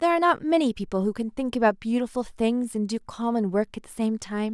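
No technical faults can be heard anywhere in the speech recording.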